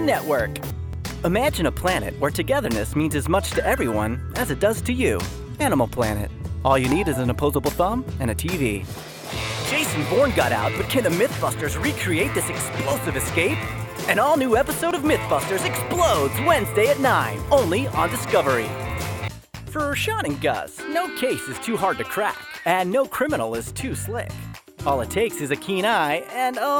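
Brief clicks or tiny skips at 0.93, 2.93, 6.92, 12.91, 14.91, 18.90 and 24.89 s come from overlap between stream segments: overlapping timestamps on 2-second segments make the player trim a few milliseconds, so the waveform jumps.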